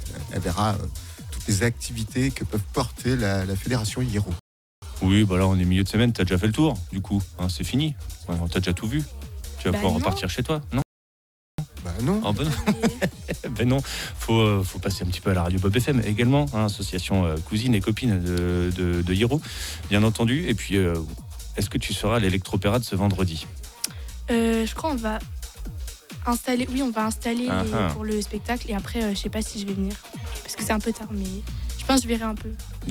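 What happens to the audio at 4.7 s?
At 4.7 s the player is in a rebuffering stall: it ran out of downloaded audio and paused until more arrived. The sound drops to silence from 4.39 to 4.82 s, then picks up exactly where it stopped, adding about 0.43 s without losing anything.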